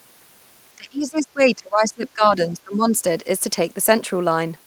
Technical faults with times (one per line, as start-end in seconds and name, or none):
0.77-3.00 speech suppressed in double talk